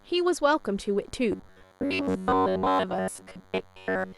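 DECT cordless phone buzz runs through the whole of this speech clip as a thin, steady 100 Hz tone with many harmonics, about 35 dB below the speech, from a nearby phone's 10 ms radio bursts being rectified in the audio circuit. Robotic sound from repeated short buffers takes over from 1.32 s to the end, a rigid metallic buzz at 93.8 Hz that still roughly tracks the speech. This is likely caused by audio arriving too seldom, so the last 10.7 ms is looped in place of most of the real signal.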